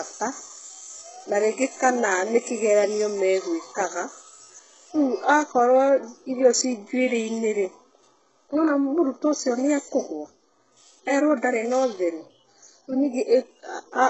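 Likely HE-AAC compression at a very low bitrate, near 8 kbps, throughout the speech: replicated treble stops at about 7.9 kHz, leaving sibilants gritty, metallic and lispy.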